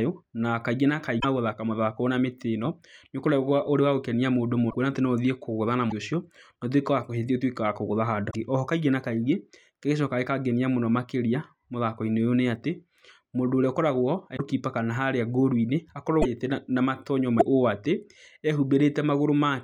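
Dropped MP3 frames likely broke the bit reservoir, so later frames decoded from another frame's bytes. The sound jumps ahead with a 30 to 57 ms chirp or gap at 1.19 s after "kaingĩ na", 4.69 s before "atĩ no", then 5.89, 8.30, 14.36, 16.21 and 17.39 s.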